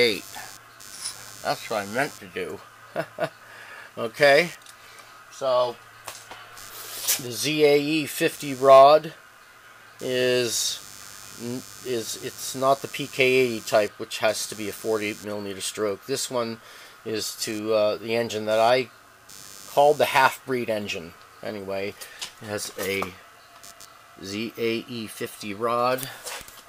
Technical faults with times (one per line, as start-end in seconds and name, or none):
0.00-26.68 computer activity noise